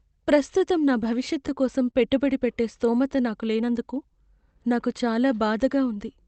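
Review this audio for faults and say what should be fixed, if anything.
Clock drift between sender and receiver runs through the whole clip. The sending device's clock appears to run roughly 2% slow, so the receiver's jitter buffer keeps draining and has to stretch or repeat small slices of the speech to keep playback going. The result is a string of small timing hiccups at irregular intervals from start to finish. Fix it by adding adaptive resampling or drift compensation at the receiver so playback rate tracks the sender's clock.

Scattered short gaps appear from 0.59 to 1.95 s, ending just before "పెట్టుబడి పెట్టే స్థోమత", and again from 3.23 to 5.00 s, right after "పెట్టుబడి పెట్టే స్థోమత". The first stretch has about four lost or late packets, patched with about 70 ms of concealment, the longest near 30 ms. The second has about five, covering about 40 ms, none longer than roughly 10 ms. 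Each hole was filled by extending the preceding sound, leaving ticks and smears on speech that remains clear, band-limited at 8 kHz by the Opus call path. Fix it by using forward error correction and a slightly deeper jitter buffer to absorb late packets.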